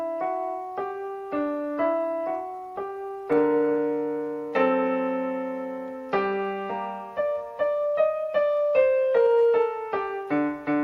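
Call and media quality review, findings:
Call bitrate drop, 1.04–3.87 s: audio turns coarse and dull for about 2.8 s, consistent with the encoder falling from around 96 to 27 kbps on a lowered bandwidth estimate.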